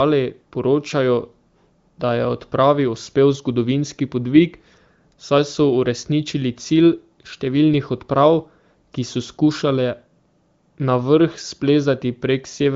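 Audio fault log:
No faults heard; wideband voice coding sounds clear.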